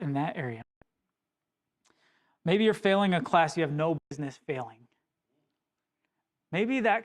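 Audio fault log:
0.62–0.82 s, digital broadcast dropout: right after "in that" the speech snaps to silence with only a very quick fade of about 3 ms, and roughly 0.2 s of programme is simply gone. The receiver lost the signal or got frames that failed their checks, so it muted until good data returned. The 192 ms gap fits about six lost frames of 32 ms each.
3.98–4.12 s, digital broadcast dropout: the same hard mute after "class you have no", this time about 128 ms long, which points to roughly four bad frames. Whatever was sent during the hole is lost.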